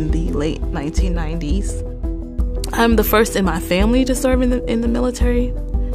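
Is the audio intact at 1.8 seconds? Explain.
Yes, at 1.8 seconds the audio plays through cleanly, with no dropout, click, distortion or other fault to be heard at that moment.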